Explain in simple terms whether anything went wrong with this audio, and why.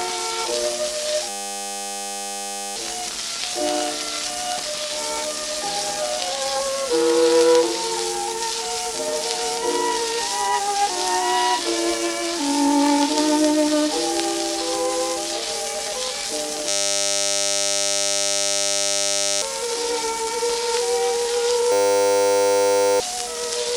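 A flat, steady buzz replaces the sound at 1.29–2.76 s, 16.69–19.42 s and 21.72–23.0 s. This is a system hang loop: the computer froze and kept replaying one 10 ms scrap, 100 times a second.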